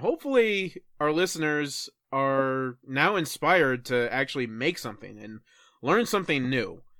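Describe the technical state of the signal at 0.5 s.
At 0.5 s the speech signal is intact, with no audible dropout, distortion, clipping or other technical fault at that point.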